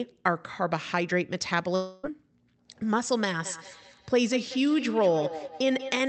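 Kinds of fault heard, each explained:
Long network dropout: From 1.75 to 2.05 s the speech is replaced by a synthetic continuation of the last sound, a buzzy, hissing smear lasting about 280 ms that decays rather than cutting to silence. When the voice returns, the stretch in between is simply gone, not delayed. This likely comes from packets failing to arrive for that span while the receiver's concealment covered the hole by extending what it last decoded.
Feedback echo between two devices: From 3.45 s to the end, each syllable returns roughly every fifth of a second as a thinner, more resonant copy, with the loudest repeats at about 10 dB below the direct speech. A second device in the room is replaying the call, and its sound re-enters the first microphone. The first device's echo canceller only subtracts its own playback, so the loop survives. The audio is band-limited to 8 kHz by the call codec path.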